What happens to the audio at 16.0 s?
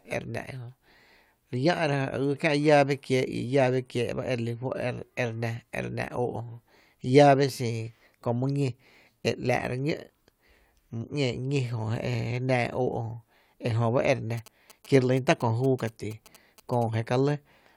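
Galloping ticks and short 217 Hz buzzes run from 14.38 to 16.84 s: GSM signalling bursts from a nearby 2G phone, rectified by the audio circuit.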